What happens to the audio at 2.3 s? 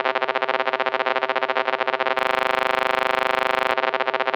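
At 2.3 s the audio has collapsed into a steady, rasping buzz at 25 Hz that lasts from 2.19 s to 3.72 s. This is a system hang loop: the system froze while the sound hardware kept replaying one 40 ms stretch of its buffer, about 38 times over.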